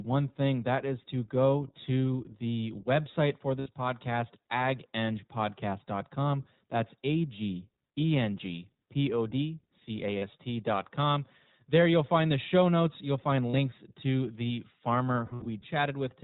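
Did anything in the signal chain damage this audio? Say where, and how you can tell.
Yes. Throughout, the speech sounds muffled, slightly rough and synthetic, with nothing above 4 kHz. That points to the iLBC codec stage, consistent with its 15.2 kbps, 20 ms frame mode.

At 3.60–3.68, 10.18–10.24, 13.51–13.55 and 15.26–15.47 s the sound freezes into a brief buzzy held vowel, then recovers instantly. These are lost iLBC frames from network packet loss, with the decoder repeating the last pitch cycle plus noise. The final burst is scattered dropouts, the longest about 70 ms.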